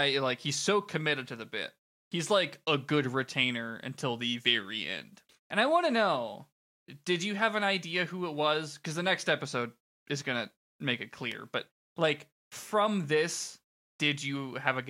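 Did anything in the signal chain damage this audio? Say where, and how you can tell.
Yes. There's a block of digital silence at 11.32 s, right after "going to make it". It's heard as a tick or dip rather than a gap, because the dropout is only about 1.45 ms long, which fits a 64-sample block. That points to the driver or buffer stage: the output buffer wasn't filled in time, so that chunk went out as zeros. The signal cuts to silence and back with no fade.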